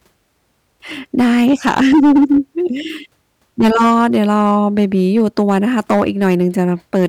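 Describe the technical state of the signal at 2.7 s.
At 2.7 s the speech is hard clipped, as it is across the entire recording. The signal was driven about 11 dB beyond what the chain could pass, so every peak that exceeded full scale was cut flat, with roughly one sample in twenty affected. Those squared-off tops generate high-order harmonics well above the speech band, heard here as a harsh, gritty fuzz riding on each louder syllable.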